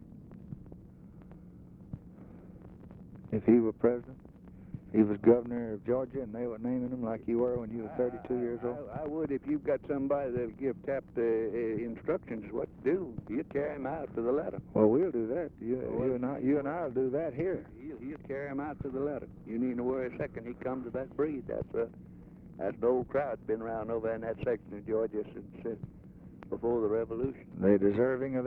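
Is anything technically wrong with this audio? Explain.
No, nothing technical stands out here; it all sounds the way it should, so there's nothing to flag.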